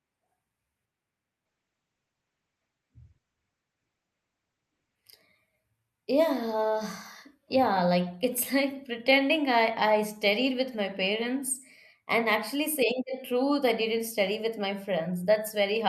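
From 1.46 s to 5.03 s a call bitrate drop forces coarse coding, consistent with a fall from roughly 64 to 9 kbps. The speech sounds rough and muffled. A spectrogram shows the top edge collapsing from 20 kHz to 8 kHz for about 3.5 s.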